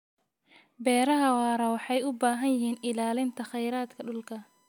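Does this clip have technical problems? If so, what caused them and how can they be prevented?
Yes. Current drawn by the USB bus in 1 ms frames leaks into the audio path through shared power or ground, causing USB whine: a fixed-pitch 1 kHz tone from 2.40 s to the end, sitting roughly 40 dB below the speech. A USB isolator, a separately powered interface or a cleaner ground path prevents it.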